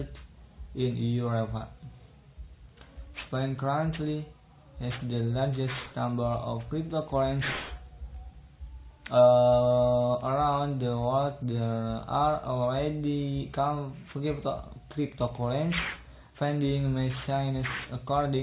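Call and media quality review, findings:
Aliasing, full clip. Gritty, metallic high end; bright content folds back to unrelated pitches below 4 kHz, roughly 15 dB under the signal. Spectrogram: mirrored, inverted partials, energy packed hard against a 4 kHz ceiling, no roll-off. Probable component: resampler without anti-alias low-pass, fitting a drop from 48 kHz to 8 kHz.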